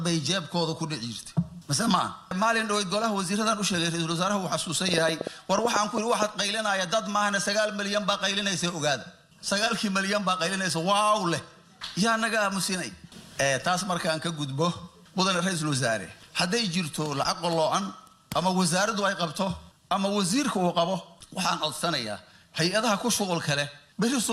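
From 4.89 s to 6.23 s a train of clicks sits on top of the audio: about ten sharp pulses of near-identical shape, arriving at roughly 7.5 per second but unevenly spaced. They peak well above the programme level, somewhere around 15 dB louder, so they stand out as a ragged ticking. The pattern points to a likely source in electrical interference from nearby equipment or a faulty connection or power supply.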